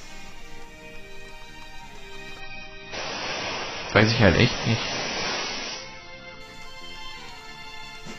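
At 2.40 s the audio abruptly loses its top end and takes on a thinner, smeared, watery quality, the mark of an adaptive stream switched to a lower bitrate after the connection slowed. The drop points to roughly 16 kbit/s AAC in place of about 96 kbit/s, so nothing above 6 kHz survives. On a spectrogram the energy above 6 kHz ends in a hard shelf, with blotchy artefacts below it. The waveform shows no gap, and full bandwidth returns sharply at 6.40 s.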